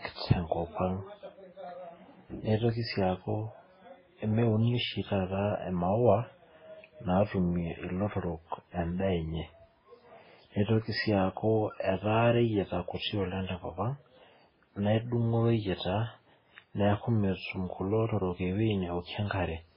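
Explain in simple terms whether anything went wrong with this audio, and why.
Yes, something went wrong: the speech sounds dull and muffled from start to finish, with nothing above about 5.3 kHz, and several different kinds of smearing and swirly warbling are layered together. That mix points to transcoding between lossy codecs, likely several compressions in a row, not one poor encoding.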